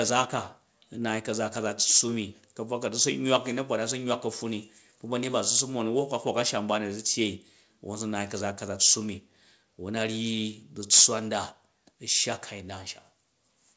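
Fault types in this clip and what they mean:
Microphone overload: three harsh, crackly peaks with flattened tops, at 1.93, 5.52 and 10.92 s, the last worst, likely an input level pushed beyond the converter's limit.
Microphone volume stepped down: at 10.95 s, right in that last distorted peak, everything drops about 2 dB at once, likely the call software cutting the mic's input gain.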